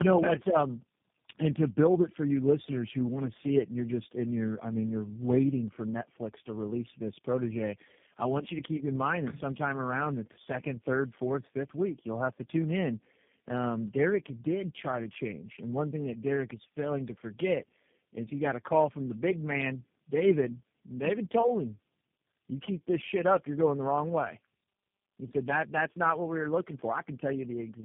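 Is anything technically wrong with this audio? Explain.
Yes. Tandem speech coding affects the whole clip. The speech sounds rough, muffled and warbly, and nothing above 3.6 kHz survives. This fits about four speech codecs in a row, each re-coding the previous one's damage.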